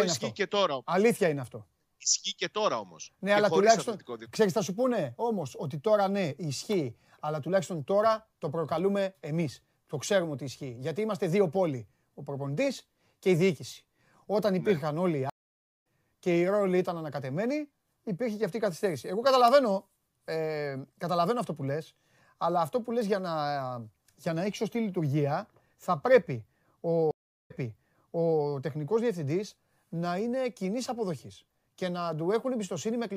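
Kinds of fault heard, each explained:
stream reconnect: A dropped connection restarts the decoder mid-stream. After a 503 ms silence, speech resumes slightly ahead. Later, a 360 ms silence replays 940 ms.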